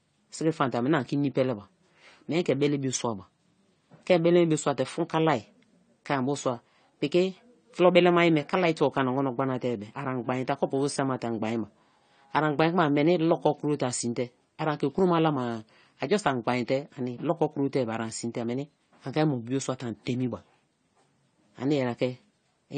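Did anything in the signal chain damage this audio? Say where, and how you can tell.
Yes. Throughout the speech, the sound is dull and smeared, with a warbling, fizzy edge and nothing at all above 9 kHz. That points to the codec stage, most likely AAC compression (AAC-LC) at a low bitrate, around 32 kbps. With so few bits, the encoder lowers its cut-off and coarsely quantises the remaining frequency lines against its hearing model. The missing top octave and the unsteady texture come from that starved quantisation.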